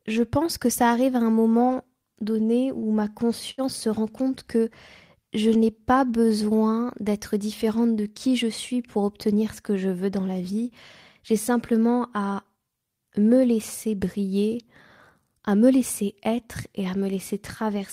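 Just after "à un moment donné", at 2.79 s, and again at 3.51 s before "se rend compte que", short stalls from a late packet occur. An emptied jitter buffer holds the speech for 35 ms, then 70 ms, with nothing lost. From 15.42 to 16.08 s, ending before "être et à", a jitter buffer speed-up trims pitch periods totalling about 70 ms. The speech runs at 108% without any pitch change and sounds rushed.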